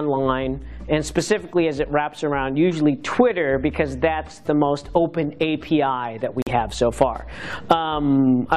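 At 6.42 s the sound drops abruptly into silence for about 64 ms, resuming at 6.49 s with no loss of timing. This is a corrupt frame muted: damaged compressed data was rejected by the decoder and replaced with silence, a gap that fits two frames of roughly 32 ms each.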